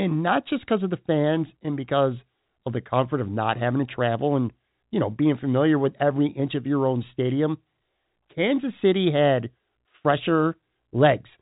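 No technical faults can be heard in this speech clip. The telephone-band character of G.711 A-law coding comes through as intended, with nothing above about 3.8 kHz and at most a faint trace of its level-following quantisation noise.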